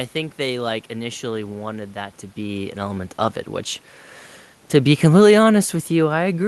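From 5.03 s to the end at 6.48 s, automatic gain falling is audible. The gain control judged the input too loud, or its background noise too strong. It pulled its gain down gradually. The speech fades, and the room noise beneath it sinks along with it.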